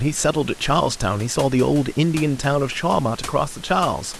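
Nothing goes wrong with the speech here, and the only other thing to hear is a bit of background noise from the room, sitting about 19 dB below the talking.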